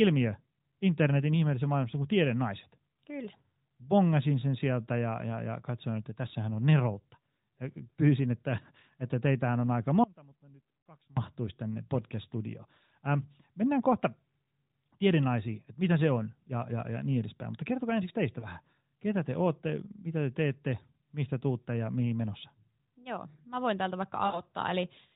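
From 10.04 to 11.17 s the signal path likely broke while the line stayed open: the speech cuts out abruptly for about 1.1 s, leaving only a faint residue far below normal level, then snaps back rather than fading in.

At 18.40 s and again from 24.26 to 24.41 s, speech frames failed their checks on the narrowband AMR link, forcing the decoder to conceal the gaps. The first loss, consistent with a single 20 ms frame, is a brief dip or warble. The second, about 80 ms long, draws the sound out and lets it sag toward silence before it returns weak or rough.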